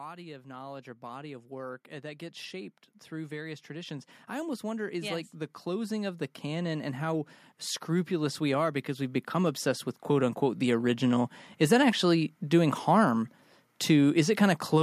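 From 0.16 to 7.34 s, automatic gain rising lifts the level by about 13 dB, then again from 7.86 to 11.37 s by about 7 dB. The gain control judged the input too quiet and ramped up slowly, so speech and background noise swell together.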